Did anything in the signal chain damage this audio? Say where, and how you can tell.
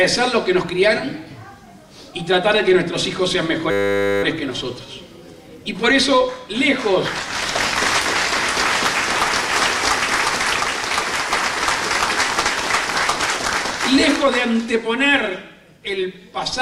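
Yes. From 3.71 to 4.23 s the audio turns into a steady 100 Hz buzz: a 10 ms fragment repeats exactly about fifty times. This is a system hang loop at the driver or buffer stage. The host stopped supplying new samples while the hardware kept replaying its ring buffer, which fits a buffer of about 10 ms. Mains hum drifts and sits under the audio, but this buzz replaces it with identical cycles, and little or no audio appears lost afterward.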